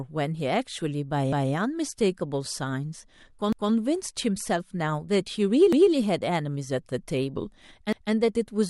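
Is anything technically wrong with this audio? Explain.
Yes. Overlapping chunks cause stutters at 3.53, 5.73 and 7.93 s, every 2.2 s. Each chunk starts 200 ms early, so that slice of speech plays twice.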